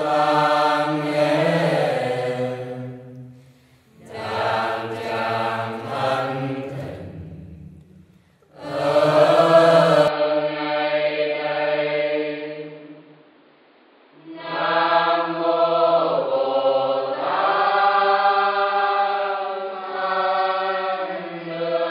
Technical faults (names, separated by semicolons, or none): input switched to a poorer device